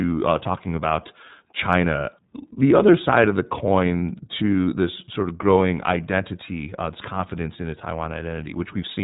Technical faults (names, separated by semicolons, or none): iLBC codec